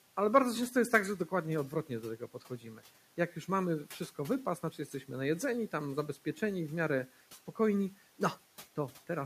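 Parts of the speech sound swallowed and faint from 2.2 to 2.82 s (about 10 dB down), from 4.71 to 5.09 s after "już mamy wszystko wypas" (about 7 dB), and from 6.14 to 6.42 s after "najedzeni tam" (about 8 dB). This is speech cut by the noise suppressor, which mistook these stretches of speech for noise and turned them down along with the room noise, which sits about 22 dB below the speech.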